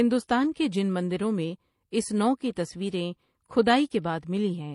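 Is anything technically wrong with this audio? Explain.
Yes. Throughout the speech, nothing is heard above 11.4 kHz, and two different kinds of compression artefact are layered together. The likely cause is transcoding between lossy codecs, with a chain that fits MP3 near 40 kbit/s re-encoded as HE-AAC near 32 kbit/s. The second encoder spends bits reproducing the first one's artefacts, adds its own artefacts, and keeps the lower band limit.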